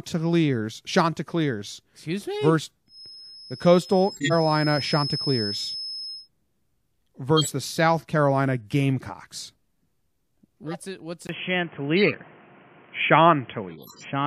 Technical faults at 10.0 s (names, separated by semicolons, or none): none